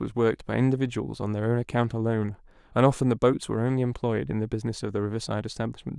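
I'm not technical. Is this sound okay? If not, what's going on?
Yes, it sounds fine.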